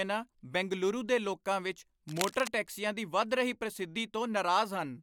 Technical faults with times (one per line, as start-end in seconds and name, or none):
2.08-2.48 cable scratch noise